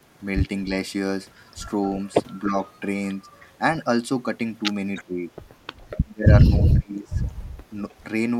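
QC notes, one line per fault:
2.49–2.53 s, 5.05–5.33 s, 5.76–6.32 s, 6.59–7.21 s: speech suppressed in double talk. The level sinks by about 5, 10, 35 and 30 dB, likely because the canceller mistook overlapping speech for echo. On the waveform the envelope shows notches and gaps, and on the spectrogram the harmonics fade or vanish.
3.40–3.45 s, 4.96–5.04 s, 7.90–7.94 s: echo leak. Brief faint copies of earlier speech return 309 ms late, about 25 to 40 dB below the talker, likely from residual loudspeaker pickup. On the spectrogram they appear as dim repeated harmonic traces offset 0.31 s.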